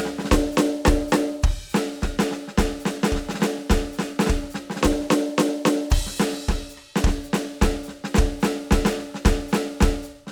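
A music clip with no technical faults heard.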